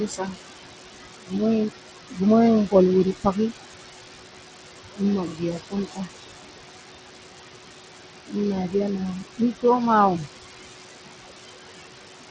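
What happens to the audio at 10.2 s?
From 10.19 to 10.28 s, the noise suppressor cuts the speech. It mistakes part of the speech for background noise and turns it down by up to about 8 dB. For about a tenth of a second, the sound turns faint and swallowed.

Noise suppressor artifacts run through this moment too. The suppressor lowers the steady room noise by about 21 dB, frame by frame. The leftover noise sinks and swells with the speech.

The treble flickers, and a gritty, aliased edge rides on the sound. This is likely Bluetooth SBC compression. Coarse sub-band quantisation starves the weak upper bands. The damage is plainly audible and fits a bitrate near 80 kbps. The missing content above 8 kHz comes from the call microphone processing.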